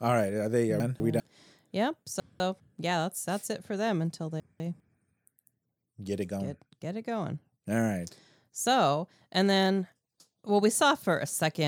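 Speech with chunks out of order three times: 0.8–1.2 s, 2.2–2.6 s just before "yeah that's that's it", and 4.4–4.8 s right after "it for them until". Each time one 200 ms chunk plays one slot late, giving a brief jumbled swap. The waveform shows abrupt steps at the joins, and the spectrogram shows vertical broadband lines where formant tracks break and resume mismatched.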